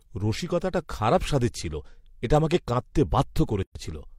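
Two separately encoded pieces were joined without trimming the encoder's start delay and end padding, leaving a gap at a join of encoded pieces. From 3.63 to 3.75 s the speech drops into a 126 ms silence with smeared edges, then resumes where it stopped.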